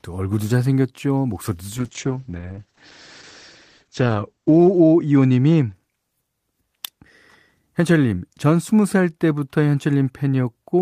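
From 1.79 to 5.79 s, a call bitrate drop makes the speech rough and muffled, consistent with roughly 32 falling to 9 kbps, with audio band-limited from 20 kHz to 8 kHz.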